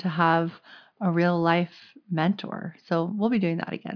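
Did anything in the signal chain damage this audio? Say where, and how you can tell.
No, nothing audible in this speech points to damage at any stage of the chain.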